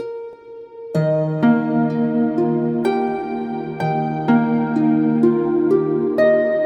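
At 0.33 s the sound jumps ahead by a few milliseconds, likely a dropped buffer (overrun), with the gap spliced shut rather than left silent.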